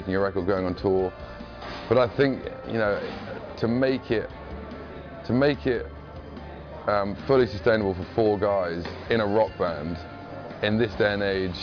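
No technical faults can be heard anywhere in this audio. Nothing in it calls for a timestamp or a fix.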